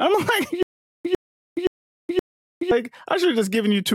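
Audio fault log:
0.63–2.71 s: stutter with silent gaps. The speech locks onto a fragment of about 101 ms, which plays four times, each followed by about 421 ms of dead digital silence, so the burst returns steadily every 522 ms. A stalled stream that likely replayed its last buffer at each retry before running dry would explain it. Unlike a plain dropout, the same fragment repeats; unlike a seamless loop, empty gaps separate the repeats.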